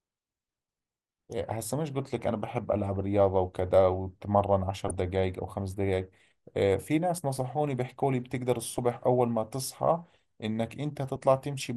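Throughout the speech the sound is dull, with a granular, gurgling edge. This is likely MP2 compression at a low rate, consistent with about 80 kbps. Short of bits, upper sub-bands switch off and flicker back, and the remaining bands are coarsely quantised, so the damage is plainly audible.

From 4.88 to 4.98 s, and again briefly at 8.78 s, DAB burbling breaks through. Bit errors got past error correction into the MP2 data and corrupted samples, putting short blips of noise into single sub-bands.

At 7.18 s there is audio missing between chunks: a brief skip where roughly 20 ms drops out and the two sides join with no silence between them. This is likely processing in 4-second chunks, with a sliver of audio lost at the changeover from one chunk to the next.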